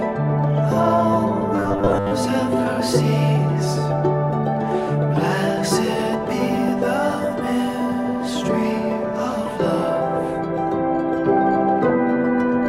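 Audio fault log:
1.57–2.12 s, robotic sound from repeated short buffers: the sound turns into a stiff, metallic buzz at 100 Hz for most of that stretch, likely because audio arrived too late and a 10 ms chunk was looped to fill the gap.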